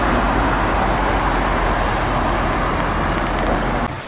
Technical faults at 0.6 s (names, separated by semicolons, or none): none